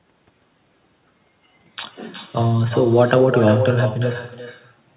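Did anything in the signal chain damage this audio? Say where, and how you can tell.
Yes. The damage is in call processing: echo with no canceller, present throughout the speech. Each phrase returns as a separate, quieter copy about 8 dB down, arriving roughly 0.4 s later, so the far end is replaying its loudspeaker output into its microphone with nothing removing it. Room reverberation would blur into a smooth decaying tail. This is a distinct, delayed repeat, and that gap matches a network round trip. The band limit at 4 kHz fits a narrowband call codec.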